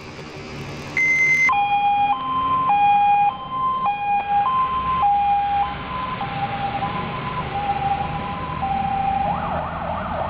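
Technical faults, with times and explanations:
0.00 to 1.51 s, planar audio read as interleaved: each 26.12 ms block, stored as all left samples then all right, is read as alternating pairs, so it plays twice at double speed. The sound rises an octave and flutters at 38.3 Hz.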